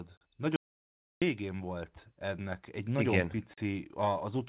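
At 0.56 s the speech cuts off abruptly and stays gone until 1.22 s, an audio dropout to silence lasting about 0.66 s. The gap is silent, with no room tone and no hiss. That sets it apart from a noise gate or a call's comfort noise. The likely cause is a brief loss of the input signal while recording continued and wrote silence. The telephone-band G.711 sound, with nothing above 4 kHz, surrounds the gap on both sides.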